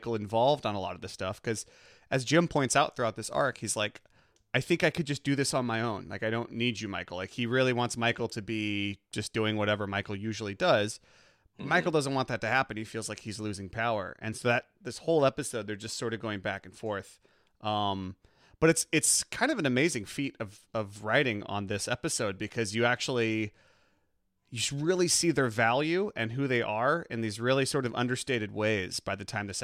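A speech recording with sample clock jitter throughout: a fine hiss-like roughness rides on the voice, strongest on loud and bright sounds, and disappears in pauses. Unlike a steady noise floor, it follows the waveform's slope, which fits timing error of about half a microsecond, roughly 45 dB down.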